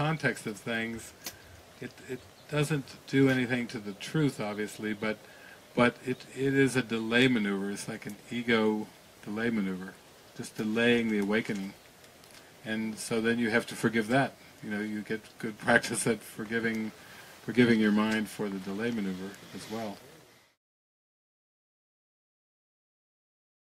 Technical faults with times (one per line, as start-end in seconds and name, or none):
none